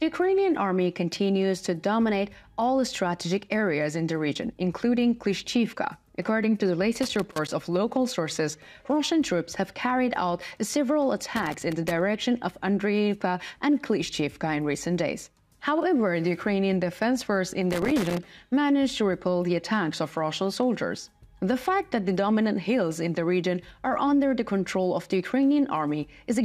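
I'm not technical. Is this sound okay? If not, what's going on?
No. There is loose connector crackle at three points: from 7.03 to 7.53 seconds, from 11.36 to 12.01 seconds, and from 17.71 to 18.18 seconds. Each burst lasts about half a second or a little more. A worn or dirty plug or socket loses and regains contact many times in quick succession. That chops the sound into fragments, so you hear brief, uneven scratching rather than clean audio.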